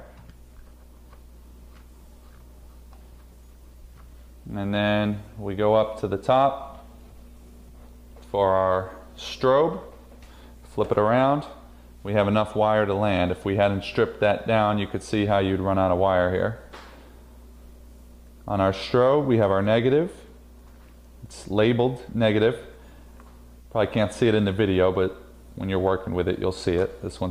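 No technical faults can be heard anywhere in this clip.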